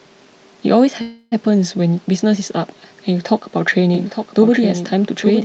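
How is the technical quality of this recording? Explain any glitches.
The recording has two glitches. It also carries the narrowed top end of a call codec, with little above about 8 kHz.

From 1.01 s to 1.34 s there is a call audio freeze. The last sound is stretched into a buzzy hiss that fades. It lasts about 0.3 s. Then the speech resumes exactly where it stopped, so nothing is lost. The likely cause is packets stalling in transit, leaving the jitter buffer empty. The receiver filled the wait, and everything after now runs about 0.3 s later.

From 3.95 s to the end there is a doubled audio track. A second copy of the speech starts abruptly. It trails the original by about a second and sits about 10 dB lower. It is dry and full-band, with no room colour or decay. The likely cause is the same audio being captured twice by a slower path, or an edit leaving two copies out of step.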